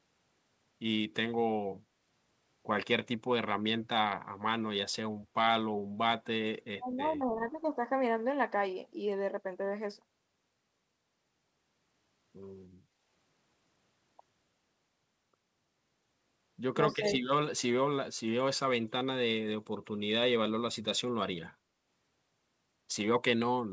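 A speech recording with a few echo-canceller problems. The first is speech suppressed in double talk, a short dip from 6.79 to 6.86 s where the voice drops by around 20 dB. It likely happens because the canceller heard the far side at the same moment and turned the near talker down with it. At 12.85 to 12.99 s the room tone sinks by about 7 dB for roughly 150 ms, then comes back. That's background gated by the echo canceller, which clamped the mic while the loudspeaker was playing. Then there's an echo leak at 16.92 s: a brief scrap of the voice returns 237 ms late, roughly 20 dB under the speech, likely residual loudspeaker pickup the canceller failed to remove. Right after it, from 16.98 to 17.28 s, the voice is suppressed in double talk again, dipping by around 10 dB over about 200 ms. Nothing comes through above 8 kHz, which fits a G.722 call path.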